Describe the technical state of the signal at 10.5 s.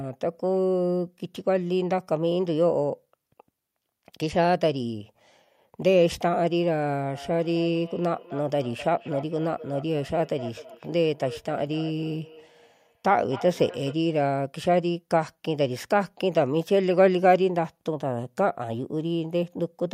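At 10.5 s the signal carries feedback echo between two devices, which runs from 7.14 s to 13.99 s. A second device on the same call, in the same room, is playing back this microphone's sound, and the microphone picks it up again. Its own echo canceller only removes what its own device plays, so the returning sound passes through. Each phrase comes back roughly every 300 ms, thinner and more ringing, peaking at about 16 dB below the speech.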